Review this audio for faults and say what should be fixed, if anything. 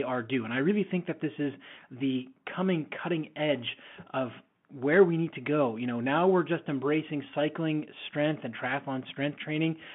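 The speech runs through a Bluetooth CVSD headset codec from start to finish. The band sits between about 150 Hz and 3.4 kHz, so the sound is thin and boxy. CVSD sends a single up-or-down bit per sample, and its step size has to adapt. Loud, bright moments outrun that step and distort. S sounds come out scratchy. A grainy hiss sits under the speech throughout. The damage is plainly audible, which fits a 64 kbps CVSD link. To prevent it, record through a wired microphone or a wideband Bluetooth mode rather than the narrowband headset profile.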